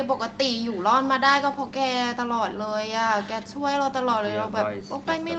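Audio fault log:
Throughout: echo with no canceller. Every stretch of speech is trailed by a faint second copy arriving about 150 ms later, sitting about 23 dB below the direct voice. The far end is playing the call through a loudspeaker, and its microphone picks that sound up again. Nothing strips it out, so it returns across the network. The copy sounds thin because it has passed through a speaker. Above the echo, the sound stops at 8 kHz, as expected from the call path.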